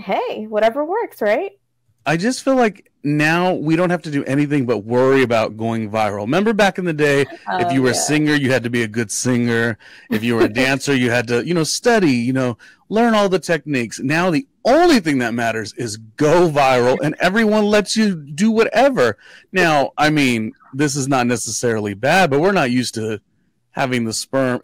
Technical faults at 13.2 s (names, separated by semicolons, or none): hard clipping